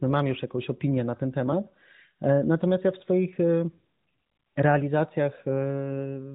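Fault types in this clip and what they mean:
No faults found; the speech has the band-limited sound of a narrowband mobile codec, which is expected for this path.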